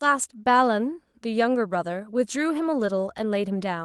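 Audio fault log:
2.77–2.87 s, lost packet rebuilt from error correction: for about a tenth of a second the sound turns rougher and grainier, with extra noise in the texture but no gap or dropout. Three separate packets went missing, roughly 60 ms in all, which fits three 20 ms Opus frames. The decoder filled that stretch from low-bitrate backup copies carried in the following packets, so the rebuilt audio is coarser than the surrounding call audio, which tops out near 12 kHz.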